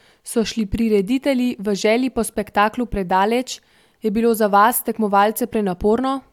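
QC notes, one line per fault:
No audible faults found in this speech recording.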